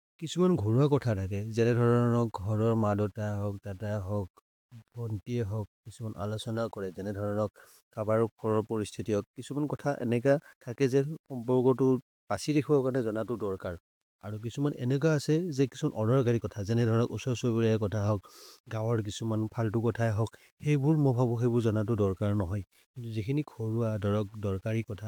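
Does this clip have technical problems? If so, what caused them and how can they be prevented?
Yes. Throughout the speech, quieter passages sound gritty, with grainy distortion that follows the signal at around 40 dB below it. This is likely low bit depth without dither, consistent with rounding to about 9 bits. Prevent it by keeping at least 16 bits and dithering any reduction.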